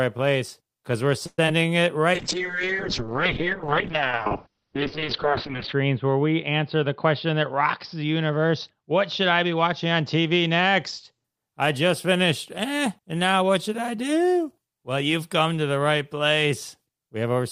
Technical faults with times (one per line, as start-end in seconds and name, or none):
1.26-1.39 call audio freeze
1.46-1.48 short concealed packet loss
2.15-11.30 call bitrate drop
6.74-8.53 jitter buffer speed-up